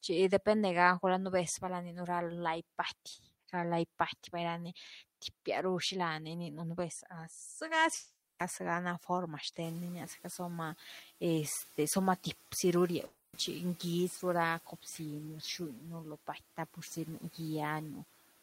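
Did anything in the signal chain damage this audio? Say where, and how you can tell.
Yes. At the network stage there are two gaps that were likely long network dropouts, one from 7.95 to 8.41 s, ending just before "na forma", and another from 13.05 to 13.35 s, right after "zi ru". In each, audio stopped arriving and the receiver stretched the last sound into a fading buzz or hiss for the whole gap, 440 ms and then 280 ms, without dropping to silence. The missing speech never returns.

In call processing, the noise suppressor is caught lagging. The room's background noise jumps by about 20 dB at roughly 9.5 s, which is part of the recording itself. The suppressor's noise estimate trails behind, so from 9.63 to 10.43 s, just after "na forma", the noise comes through with less reduction and then sinks by about 6 dB over 800 ms as the estimate adapts.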